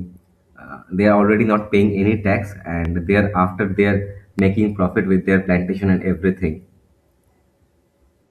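At 2.85 to 2.87 s, a loud pop cuts in on the speech. It is a single sharp click, peaking a few decibels above the voice. The speech carries on beneath it unbroken. At 4.39 to 4.41 s, just before "profit with their plantation", a second loud pop lands the same way, with the same brief, hard attack. Each sounds like a sudden voltage step, likely from a switch, a connector or static, passing through the signal chain.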